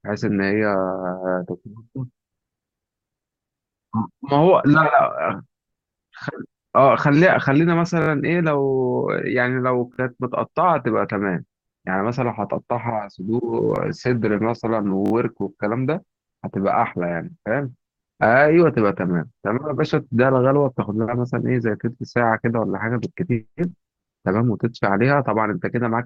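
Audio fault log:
8.02–8.08, 9.94–9.98, 13.76–13.78, 15.06–15.12 s: repeated buffer. A tiny slice of sound replays with hard joins, forming brief buzzy stutters whose lengths fit a 20 ms buffer played again while late audio was awaited. Unlike a dropout, the sound is held rather than silenced, and nothing seems lost.
12.19–24.27 s: adaptive stream at a lower bitrate. Quality suddenly drops with stronger codec artefacts, consistent with Opus falling from 64 to 16 kbit/s on a slowed connection. Unlike buffer faults, the switch itself leaves no gap, just a sustained quality step.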